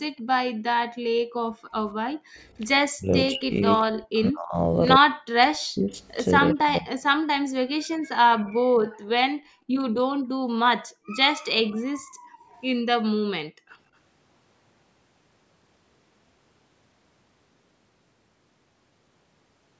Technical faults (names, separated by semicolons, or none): echo leak; background gated by the echo canceller; speech suppressed in double talk